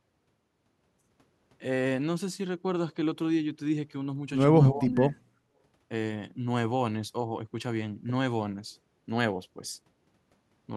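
From 4.72 to 5.2 s the speech sinks sharply, by about 15 dB at its deepest, across most of that half second before recovering. This is speech suppressed in double talk, likely an echo canceller that mistook the talker for loudspeaker echo while both sides spoke, and turned everything down.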